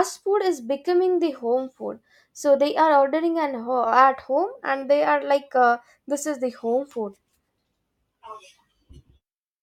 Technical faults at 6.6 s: none

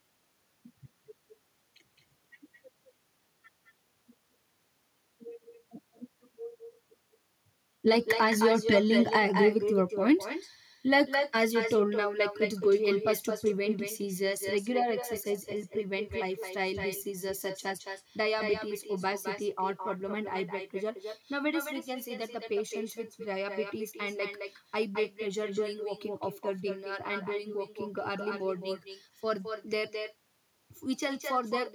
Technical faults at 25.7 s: echo with no canceller

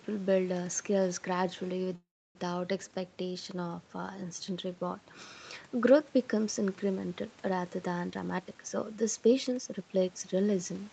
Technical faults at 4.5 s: none

